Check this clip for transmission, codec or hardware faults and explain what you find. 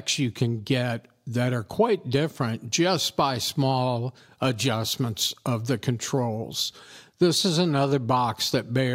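Nothing wrong can be heard anywhere in this recording.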